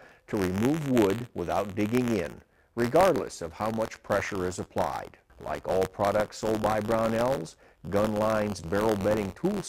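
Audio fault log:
Throughout, buffer tearing. A steady robotic rattle sits at about 86 Hz, which fits a 512-sample buffer. In each period, a small slice, a few percent, replays audio from roughly 20 ms earlier. Hard joins at both ends cause the buzz. It follows the signal.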